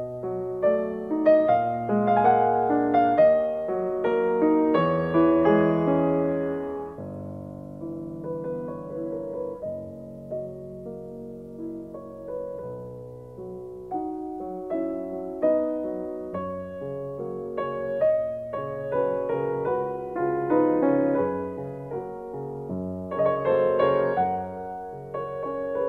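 Nothing here stands out as a technical fault; the audio runs along without any glitch, dropout or distortion worth pointing to.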